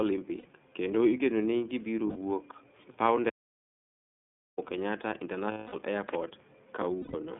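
Speech runs the whole clip through the iLBC codec. The band stops near 3.5 kHz, with little below 150 Hz. Each 30 ms frame is coded on its own, and the damage is plainly audible as a rough, synthetic edge. That fits the 13.33 kbps mode. Lost iLBC frames cause four short gaps: 0.38 to 0.46 s (60 ms), right before "kendo igeno ni gibiro", then 2.07 to 2.17 s (90 ms), right after those same words, then 5.52 to 5.74 s (210 ms), and 7.01 to 7.15 s (120 ms). The decoder repeats the last pitch cycle with noise. Each gap becomes a held, buzzy vowel, and the longest one fades. Clean speech resumes almost at once. An audio dropout to silence runs from 3.29 to 4.58 s, about 1.29 s. The sound cuts to silence with no room tone and comes back mid-flow. The likely cause is lost input while the recorder kept writing silence.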